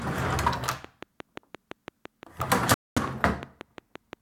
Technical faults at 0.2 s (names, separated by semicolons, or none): none